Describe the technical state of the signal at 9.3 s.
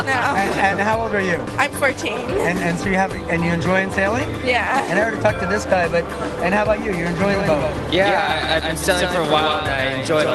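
At 9.3 s a doubled audio track is present, running from 7.21 s to the end: a dry copy about 5 dB quieter trails roughly 150 ms behind, likely from a second, slower capture path.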